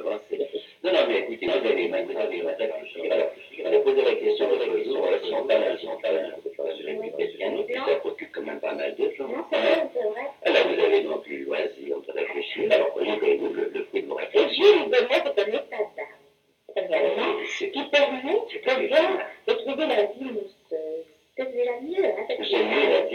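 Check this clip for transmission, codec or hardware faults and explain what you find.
One fault appears. From 1.48 to 7.74 s there is a doubled audio track: a dry copy trails about half a second behind, roughly 5 dB quieter, likely captured again by a slower path. On a spectrogram every pattern repeats, shifted right, and it starts and stops abruptly.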